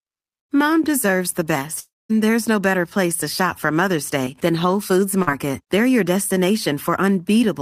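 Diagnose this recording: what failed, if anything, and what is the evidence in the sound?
Network, long network dropout: from 1.79 to 2.11 s the last sound is stretched, then goes silent. Audio resumes at "there's no better place", likely missing about 0.3 s.

Network, short concealed packet loss: brief smears at 4.25–4.28 s and 5.22–5.29 s. About 20 ms and 40 ms went missing. The decoder extended the preceding sound, then blended back.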